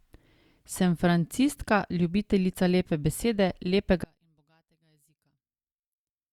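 From 4.04 s, just after "lepe besede", one channel inverted is the likely cause: the mono sum cancels, and the speech falls about 38 dB to a faint trace.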